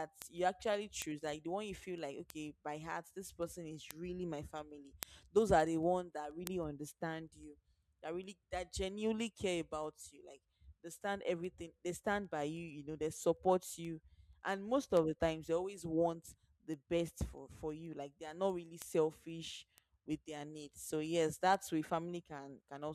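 From 0.22 s to 22.83 s there are word clock ticks, roughly every 0.15 s: an unlocked digital link slips a sample per clock wrap, leaving sharp, uneven clicks under the speech.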